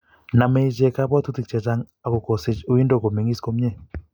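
No technical faults can be heard anywhere in the speech.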